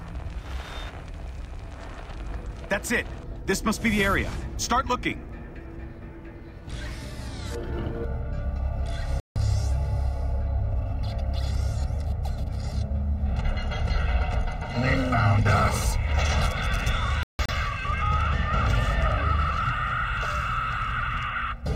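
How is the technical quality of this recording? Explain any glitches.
The recording has two clear technical problems: comb filtering from a channel delay, and two digital broadcast dropouts.

From 8.05 s to the end, one channel lags the other by roughly 1.5 ms. Summed to mono, this cuts regularly spaced notches starting near 300 Hz, so the sound turns hollow and phasey. A spectrogram shows these as evenly spaced horizontal dark bands.

Digital broadcast dropouts occur at 9.20–9.36 s, a 160 ms silent gap, and at 17.23–17.49 s, two holes totalling 192 ms with the longest lasting 160 ms. The receiver muted while frames were lost, so the sound drops to silence.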